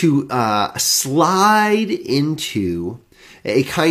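No technical faults can be heard in this speech.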